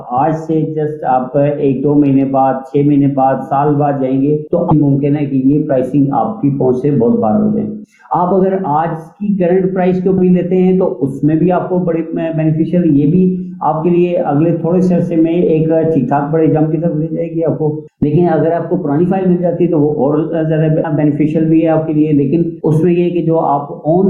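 The audio shows gain pumping from start to finish. The swing is about 5 dB. Loud and quiet parts sit unnaturally close in level, so the whole clip sounds squashed. The likely cause is input gain set far too high for the microphone, with a fast limiter or compressor pulling the level down on every peak and releasing it in the gaps.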